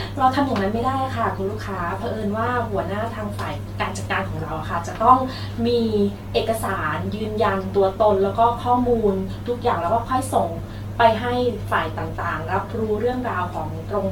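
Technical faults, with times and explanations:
Throughout, generation loss: the speech sounds swirly, hollow and smeared, with consonant attacks blurred and nothing above 17 kHz. That's more damage than a single lossy encode at this quality would leave. The likely cause is the audio going through an AAC-LC encoder around seven times, with a character that fits roughly 96 kbit/s. Each pass requantises on a shifted frame grid, so the noise and spectral holes pile up.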